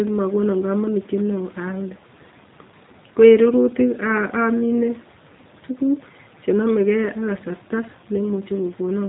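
Throughout, G.729 codec damage removes all above 3.8 kHz and adds a rough, synthetic edge: the speech is rebuilt from pulses, not merely filtered, which fits 8 kbit/s.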